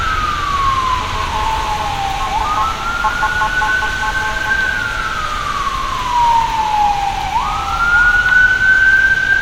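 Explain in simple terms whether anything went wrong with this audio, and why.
At about 5.01 to 5.04 s, a brief chirp-like blip cuts through this recording of everyday sound. That is a corrupt frame decoded: a small chunk of compressed data, probably a couple of frames, got damaged, and the player played it anyway, scattering sound into the wrong pitches.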